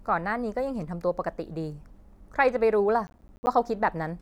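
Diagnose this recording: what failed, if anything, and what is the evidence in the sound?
From 3.07 to 3.47 s the speech is torn by a gritty burst of crackle, dense tiny dropouts with hard edges. This is processor overload crackle at the driver or buffer stage: many buffers of around ten milliseconds missed their deadlines, each gap filled with silence.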